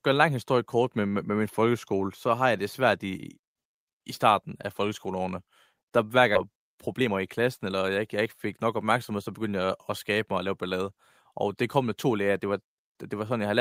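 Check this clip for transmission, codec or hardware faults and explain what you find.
Two transmission faults occur close together.

At 6.35 s there is a skip ahead. A stretch of speech, around 0.7 s, was discarded while later audio was already queued, so playback jumps straight across it. The two sides are joined with no silence, leaving an abrupt cut mid-flow.

From 6.45 s to 9.19 s comes a jitter buffer speed-up. The buffer still held more than its target, so the receiver repeatedly trimmed short pitch-period pieces, removing roughly 0.3 s. Speech runs at about 110% speed with unchanged pitch, sounding hurried.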